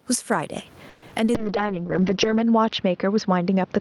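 Speech recording with gain pumping throughout: the level swings by around 15 dB, likely from a fast limiter acting on far too much input gain. From 0.89 to 1.45 s, repeated packet loss gives a choppy, robotic sound, with four gaps patched by extending earlier sound, the longest about 130 ms, and nearly half that span concealed. From 1.35 s to the end, a call bitrate drop leaves the sound rough and muffled, with the top cut near 6 kHz instead of extending toward 20 kHz, which fits an encoder falling from roughly 48 to 7 kbps. The low room noise sits about 41 dB below the speech.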